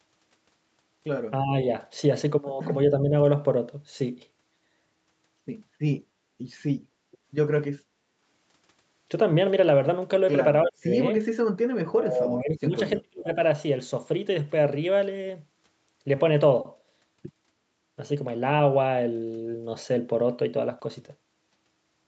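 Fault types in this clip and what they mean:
Speech suppressed in double talk: the echo canceller likely treated overlapping talk as echo and turned it down, so speech dips slightly at first, then nearly vanishes for up to about a second.
Background gated by the echo canceller: while the loudspeaker played, the canceller clamped the microphone, so the room sound drops by about 9 dB for a brief moment.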